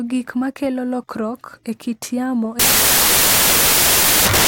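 From 2.59 s to the end at 4.48 s, the speech gives way to samples built from the wrong bytes. Misassembled bytes let rapidly changing low bits dominate each value, producing loud, harsh broadband noise. The waveform fills into a dense block and the spectrogram turns flat broadband grey.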